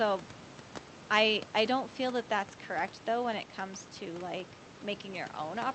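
Nothing stood out on listening to this speech recording.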